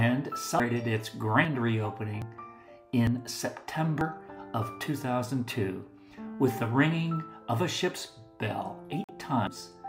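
The audio skips forward abruptly at 0.60, 1.45, 2.22, 3.07, 4.01 and 9.47 s. Each jump loses sound: roughly a third of a second at the first and last, about a tenth elsewhere. These are likely dropped buffers (overrun). At 9.04 to 9.11 s, the sound cuts to silence for about 46 ms, then resumes further on, likely a Bluetooth dropout.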